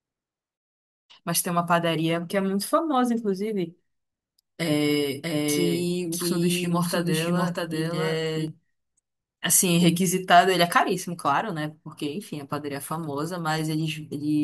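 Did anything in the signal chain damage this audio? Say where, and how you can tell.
Yes. A doubled audio track runs from 5.24 s to 8.48 s. A second full-band copy of the speech trails the original by roughly 0.7 s at about 5 dB lower, with none of the decay or room colour a real echo would have, and it cuts in and out abruptly at those times. The likely cause is a capture or routing stage picking the signal up twice, once through a slower path, so the two copies stay a fixed interval apart.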